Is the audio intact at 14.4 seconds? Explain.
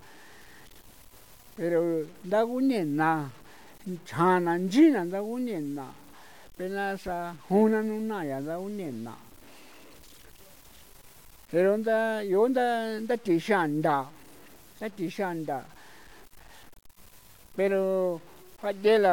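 No, at 14.4 seconds, as throughout the clip, the speech sounds gritty and grainy, with quiet parts sputtering, likely from low bit depth without dither: about 7 bits, truncated, leaving signal-following error near 30 dB below the speech.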